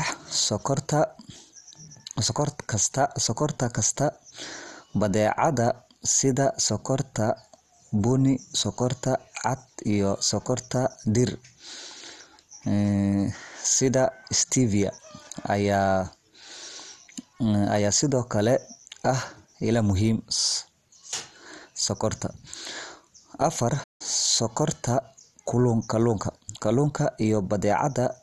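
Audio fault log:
Throughout: MP2 compression, dull and gurgling with granular grit; spectrogram shows flickering upper bands, likely from a low bitrate around 64 kbps.
23.83 to 24.02 s: playback stall, the speech cuts out for about 0.16 s then resumes; waveform shows a flat silent gap, likely from a player data underrun.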